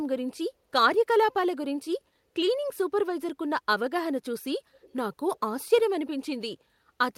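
At 4.81–4.93 s, an echo leak, likely from an echo canceller missing loudspeaker pickup, sends back a faint, brief copy of the speech 235 ms late.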